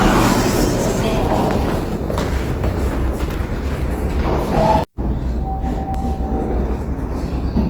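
The whole clip has a rough, grainy texture, most likely from Opus compression in its music mode. Bandwidth stays full, but the encoder is filling starved bands with folded or noisy content, which fits a low rate around 24 kbps.

At 3.34 s and again at 5.94 s the sound jumps forward with no gap. That's likely a dropped buffer (overrun): the hardware overwrote samples before they were read, losing roughly a fifth of a second each time.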